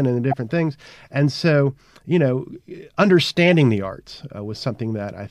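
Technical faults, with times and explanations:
0.31–0.37 s, right after "and the", and 3.47–3.49 s, just before "the arts": corrupt frame decoded. Damaged compressed frames were played anyway, so fairly loud energy lands at the wrong frequencies as short, chirpy noise bursts.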